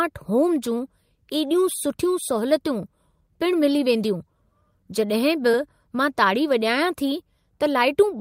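Around 5.51 to 5.55 s there's a short concealed packet loss. About 20 ms of the call arrived too late for the decoder, so the receiver papered over roughly 18 ms by extending the preceding sound and easing back into the real signal. You hear it as a quick smear in the speech.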